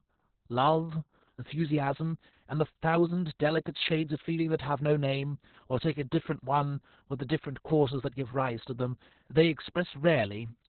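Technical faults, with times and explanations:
Throughout, Opus voice compression: speech sounds muffled, hoarse and slightly robotic, with nothing above 4.3 kHz, as narrowband SILK coding crudely models the excitation at what sounds like about 6 kbps.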